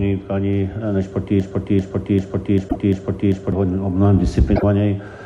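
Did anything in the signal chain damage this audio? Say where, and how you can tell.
Yes. From 1.40 s to 3.52 s a broken-record loop repeats a 0.39 s fragment six times back to back, likely a playback or stream buffer that stalled and kept resending its last block. On a waveform, identical blocks tile exactly, and the spectrogram shows a repeating stripe pattern.

Two short glitches, at 2.68 to 2.76 s and 4.55 to 4.64 s, sound like a broken MP3 bit reservoir, likely at the codec stage after frames were dropped. The audio jumps ahead and the decoder briefly produces garbage. Each glitch lasts a few frames, which fits 24 ms MP3 frames.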